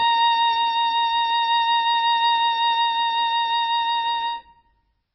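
A short piece of music with heavy damage all the way through, most likely from MP3 compression at a starved bitrate. The sound points to something around 16 kbps. Everything above 5.5 kHz is gone, so the top end sounds dull and boxed in. What's left has that watery, swirly texture, because quieter frequency detail keeps dropping in and out from one frame to the next, and the attacks come across smeared.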